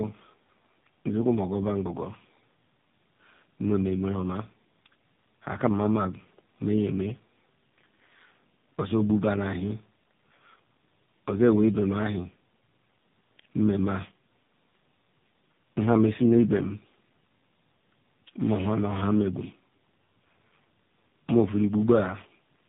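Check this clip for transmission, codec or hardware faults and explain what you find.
There is one fault, and it runs through the whole clip.

Tandem speech coding, throughout: the speech has passed through three different speech codecs in a row, each re-encoding the previous one's degraded output. The result fits a chain ending in AMR-NB. The speech sounds rough, warbly and muffled, with nothing above 3.8 kHz.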